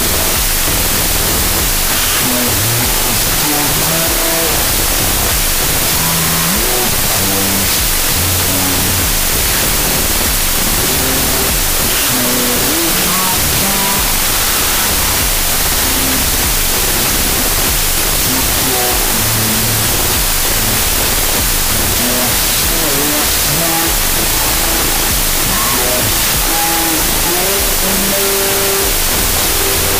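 From start to finish, the audio suffers a wrong sample width fault. It sounds like audio stored as 32-bit floats but read as 16-bit integers. Each four-byte sample is split into two values. That doubles the sample count, so everything plays at half speed, an octave low. Half of those values come from the low mantissa bytes and turn into loud, harsh noise. The other half carry only a distorted trace of the real signal, buried underneath.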